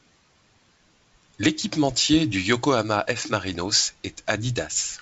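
Nothing stood out on listening to this speech recording, and no technical fault could be heard anywhere in it.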